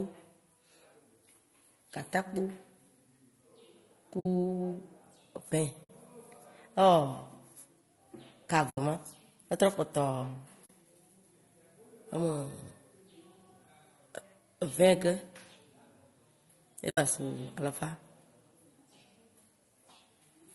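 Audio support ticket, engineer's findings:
Whole clip: rough, grainy speech, noise filling between harmonics, lowered or synthetic top band. Likely low-delay AAC compression (AAC-ELD) near 32 kbps; the grain tracks the voice, unlike steady background hiss.

4.19 s, 5.83 s, 8.69 s, 10.65 s, 16.89 s: soft-faded holes of 40 to 80 ms. AAC frame loss with muting, whole 20 ms frames zeroed. Overlapping windows fade, unlike hard dropouts.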